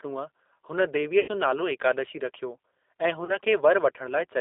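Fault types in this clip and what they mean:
G.729 codec: The whole clip of speech has passed through an 8 kbit/s G.729-family codec, which rebuilds each 10 ms frame from a vocal tract filter, a pitch predictor and a handful of pulses. The band is limited to roughly 300 Hz to 3.7 kHz, so there is no air or sibilant brightness, and the coding damage is plainly audible as a rough, slightly synthetic grain over the voice.
VoIP packet loss concealed by the speech codec: Two gaps in the packet stream were filled by the decoder extrapolating from its last pitch and filter settings. The first, about 80 ms from 1.20 to 1.29 s, stretches the last sound and lets it fade, and the second, about 40 ms from 3.25 to 3.38 s, is shorter. Because each frame depends on the previous one, the voice stays weakened briefly after each gap.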